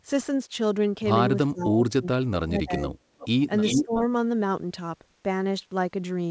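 From 1.51 to 2.95 s, speech suppressed in double talk: the echo canceller, likely confused by both sides talking at once, pulled the voice down, dipping it by up to about 30 dB over roughly a second in total. At 3.18 to 3.29 s, an echo leak: the far end's canceller likely let its loudspeaker pickup through, returning a faint copy about 20 dB below the speech, delayed by 0.36 s. The echo leak returns at 3.61 to 3.85 s, again likely from the same residual echo, this time about as loud as the speech and with the same 0.36 s delay. Overlapping it, from 3.7 to 4.05 s, speech is suppressed in double talk again, likely as both sides talk at once, with the voice dropping by up to about 15 dB for roughly 0.3 s. Throughout, the call path passes nothing above 8 kHz, which fits G.722 at 64 kbps.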